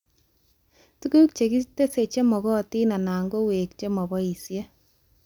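No technical faults are audible anywhere in the recording.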